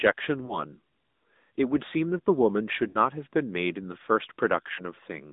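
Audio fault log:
Throughout, AMR narrowband mobile codec: sound is squeezed into roughly 200 Hz to 3.7 kHz, with a plainly buzzy, synthetic edge that points to a mid rate near 10 kbps.
0.46–0.59 s, 2.88–2.97 s, 4.74–4.82 s, lost AMR speech frames: brief warbly smears and dips as the decoder repeats old settings at falling gain. The longest gap, at 2.88 s, fits roughly three missing frames.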